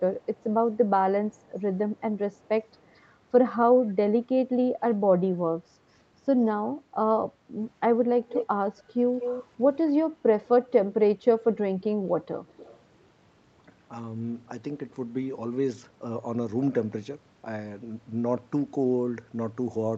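Echo leak at 0.21, 1.32, 2.81, 8.29, 8.78, 9.2 and 12.48 s: a delayed copy of the speech arrives 217 ms late, barely audible at first but almost as loud as the speech near 8.3 s. It is likely an echo canceller letting loudspeaker pickup through.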